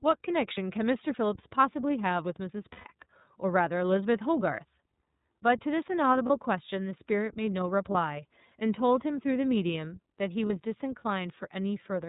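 This speech clip... no, I must not start that way.

A speech recording carried through the iLBC codec, with plainly audible coding damage throughout: the band stops at 4 kHz and the voice has a slightly rough, synthetic texture, consistent with 30 ms frames at about 13.3 kbps. Each frame's excitation is coded independently, which keeps the sound intelligible but strips natural detail. Lost iLBC frames interrupt it at 0.54, 2.72, 6.26, 7.91 and 10.46 s. Four are single 30 ms losses, heard as a brief held buzzy fill. The loss from 2.72 to 2.87 s spans 120 ms, so the repeated pitch cycle with added noise fades audibly into a breathy, sustained vowel before the voice snaps back cleanly, since the next frame needs no history to decode.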